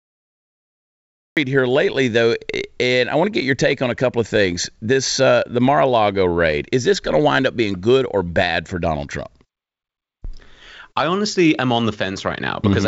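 A speech recording with a cut-off start: digital silence runs to 1.37 s, where the sound begins mid-syllable with no attack, unlike a gated or faded opening. It comes through a call path with nothing above 8 kHz.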